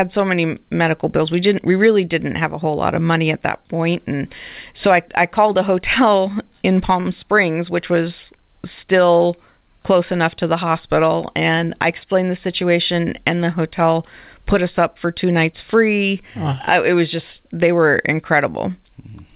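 At 7.00 to 7.07 s, a short stall from a late packet emptied the jitter buffer. The receiver stretched the last sound for 44 ms, adding that much delay. It's a held syllable with a slight buzz or dip: flat, unchanging harmonics on a spectrogram, repeating cycles in the waveform.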